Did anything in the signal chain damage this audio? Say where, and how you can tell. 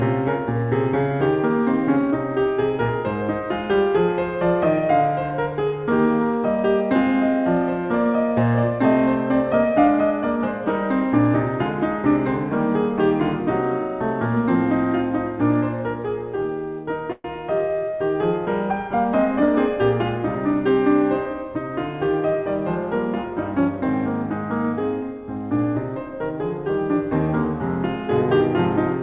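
Yes. At the network and jitter-buffer stage, a call audio freeze runs from 17.12 to 17.27 s in this music, likely caused by packets stalling in transit until the buffer ran dry. The receiver stretched the last sound into a fading buzz for about 123 ms, then about 10 ms of silence. The music then resumes exactly where it left off, nothing skipped, but everything after lands about 123 ms late. The band-limited G.711 sound, empty above 4 kHz, continues unchanged across the stall.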